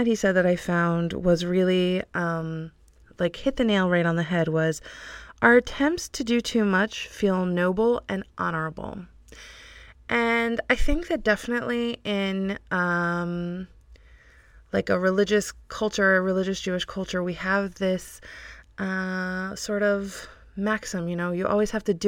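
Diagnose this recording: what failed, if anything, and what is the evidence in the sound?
The failure is at the sample-rate conversion stage: imaging from linear upsampling, present through the whole speech clip. The audio was raised from 24 kHz to 44.1 kHz by joining samples with straight lines, which filters poorly. The top of the original band is dulled, and a faint mirrored copy of the spectrum, around 40 dB down, sits between 12 kHz and 24 kHz, giving sibilants a light metallic shimmer. Unlike aliasing, which folds energy down into the band, this residue lies only above 12 kHz and mirrors the content below it.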